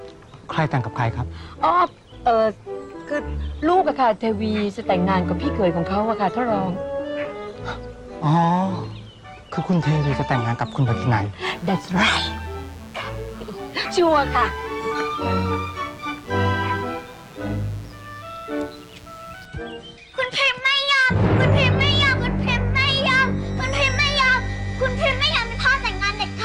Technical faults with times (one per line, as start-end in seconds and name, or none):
11.46-19.46 mains buzz